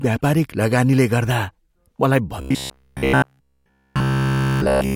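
Robotic sound from repeated short buffers runs from 2.41 to 4.95 s: the speech becomes a rigid metallic buzz near 66.7 Hz, likely from one 15 ms buffer looped throughout.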